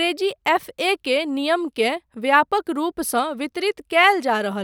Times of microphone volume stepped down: none

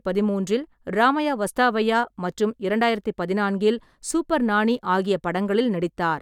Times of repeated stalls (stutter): none

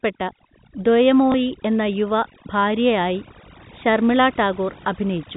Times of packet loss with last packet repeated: 1.32-1.34

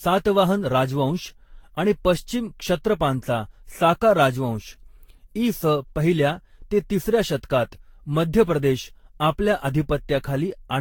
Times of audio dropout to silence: none

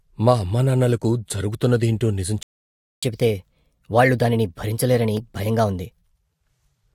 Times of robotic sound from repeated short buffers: none

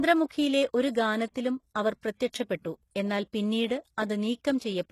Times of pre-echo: 1.32-1.35

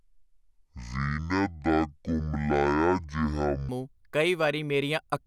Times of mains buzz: none

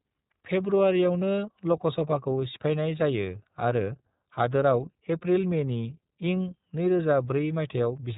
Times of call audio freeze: none

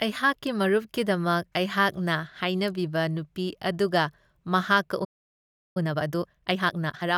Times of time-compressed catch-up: 5.77-7.07

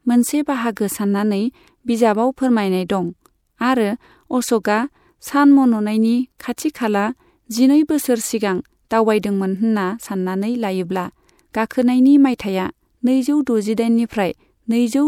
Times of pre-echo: 4.63, 12.38

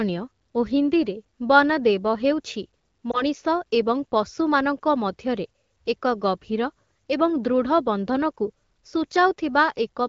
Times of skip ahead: none

